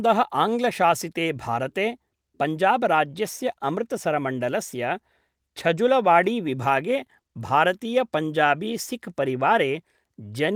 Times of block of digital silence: none

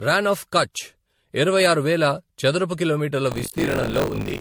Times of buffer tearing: 3.30-4.41

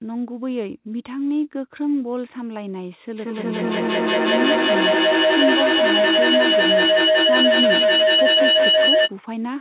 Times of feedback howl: 3.17-9.15

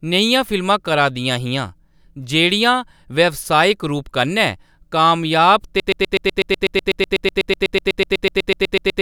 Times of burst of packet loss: none

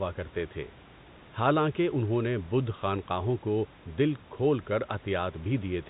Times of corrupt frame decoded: none

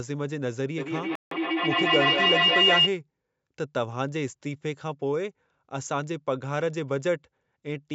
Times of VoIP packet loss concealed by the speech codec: none

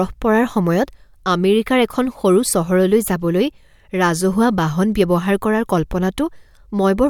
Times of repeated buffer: none

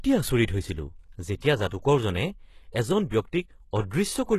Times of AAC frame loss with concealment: none

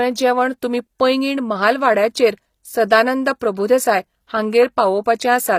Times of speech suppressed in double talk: none

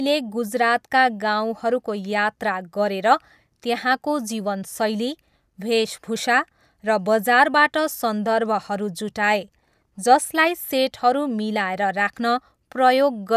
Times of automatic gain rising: none

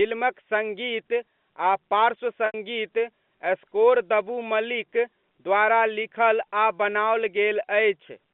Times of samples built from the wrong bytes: none

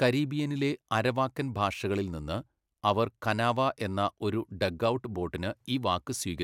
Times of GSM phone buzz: none

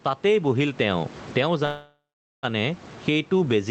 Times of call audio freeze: 1.65-2.45

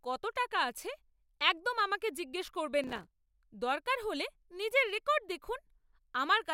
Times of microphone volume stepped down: none

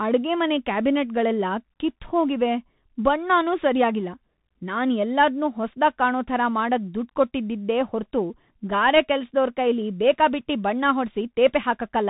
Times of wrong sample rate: none

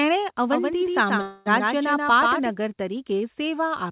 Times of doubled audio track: 0.52-2.50

